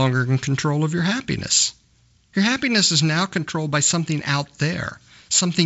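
Nothing here counts as a fault: the speech comes over G.722 wideband telephone coding at 56 kbit/s, with nothing above about 7.7 kHz and only the light coding texture that path leaves behind.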